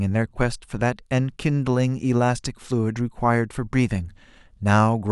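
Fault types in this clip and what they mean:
Nothing here stands out as a fault; the speech comes across without any technical problems to point to.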